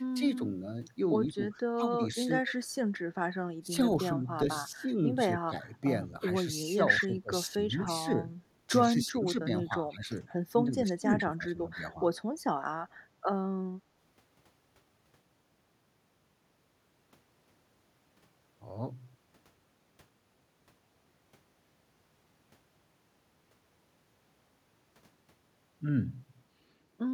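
Between 1.33 and 2.11 s the speech dips by about 10 dB for roughly a fifth of a second in total. This is speech suppressed in double talk: the echo canceller was likely unable to separate the near talker from loudspeaker echo while both sides spoke, so it attenuated everything it passed.

From 2.47 to 2.52 s a brief echo leak appears. A faint copy of the voice, about 20 dB down, arrives 139 ms behind the original. This is likely residual loudspeaker pickup that the far-end canceller failed to remove and sent back.

The suppression returns at 3.63 to 3.71 s as a shallow dip of about 5 dB. From 4.45 to 4.87 s it cuts deeper, about 15 dB. The longest stretches follow at 5.4 to 7.89 s (about 20 dB), 8.88 to 10.11 s (about 10 dB) and 10.49 to 12.03 s (about 25 dB). In each of these, roughly a second of speech is pulled down in pieces.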